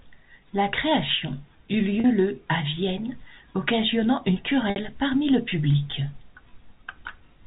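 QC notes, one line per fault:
2.00 to 2.04 s and 4.70 to 4.76 s, packet loss with pitch repetition. Audio drops out for 40 ms after "création eut" and for 60 ms after "occasionnant une", before "parmi le public". The receiver fills each gap by repeating the last pitch period, so the first sounds like a brief held, buzzy tone, while the longer second one fades into silence before speech returns with a short cross-fade. The gaps fit two and three lost 20 ms packets. The G.711 telephone band limit is audible across the clip.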